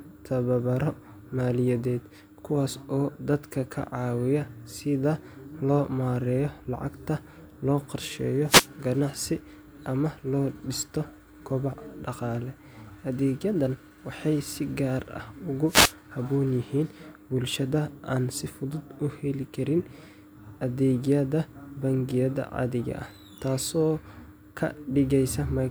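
Wireless microphone noise hits occur at 8.45–8.69 s and 15.66–15.95 s. The radio signal fades briefly, so receiver static swishes over the speech rather than cutting it to silence like a digital dropout.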